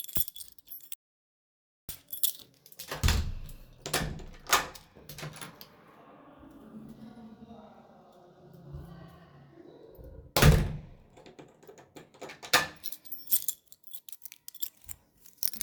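At 0.94 s the sound cuts off abruptly into an audio dropout to silence, returning mid-flow at 1.89 s after about 0.95 s. The input was likely lost while recording continued writing silence; unlike a natural pause or noise gate, not even room tone remains.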